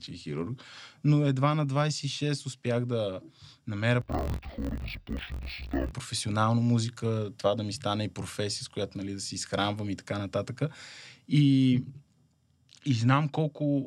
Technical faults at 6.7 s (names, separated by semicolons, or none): none